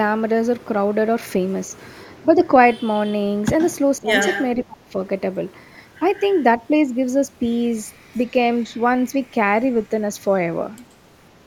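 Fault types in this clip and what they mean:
Echo leak: A faint delayed copy of the speech comes back about 127 ms late. It sits roughly 10 dB below the direct voice. It is heard at 3.59 to 3.68 s and 4.21 to 4.44 s. The likely cause is a loudspeaker echo canceller letting pickup through.
Speech suppressed in double talk: The talker's voice dips sharply while the other side is also speaking. It falls by around 20 dB at 3.99 to 4.10 s and around 25 dB at 4.56 to 4.94 s. An echo canceller likely mistook the talker for echo.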